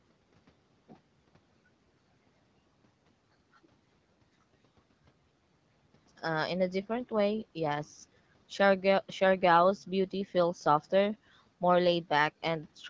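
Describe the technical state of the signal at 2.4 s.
At 2.4 s the audio is intact, with no fault present at that moment.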